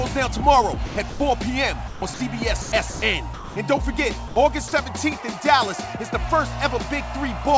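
Sound chopped by the voice detector occurs at 0.86–1.20 s, 1.88–2.20 s and 2.62–3.02 s. The sender's detector likely toggled on and off within each stretch, swapping about 200 to 220 ms of real sound for comfort noise, so the audio stutters.

Sound dropped by the voice detector follows at 3.34–3.56 s, 4.28–4.36 s and 4.68–4.72 s. The detector likely mistook quiet sound for background and stopped sending, losing 220, 80 and 40 ms. Steady comfort noise fills each gap until sound resumes. The band stops at 8 kHz throughout, which fits the G.722 call path.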